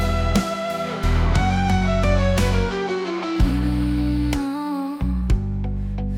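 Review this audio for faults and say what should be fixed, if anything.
Compressed frames skipped at 1.03 s, 3.51 s and 5.21 s: whole blocks of the compressed stream never reach the output, so the audio jumps forward by roughly 20, 100 and 50 ms. These gaps fit whole 24 ms frames. Preventing this means protecting the file or stream against frame loss and corruption, and having the decoder conceal a missing frame rather than drop it.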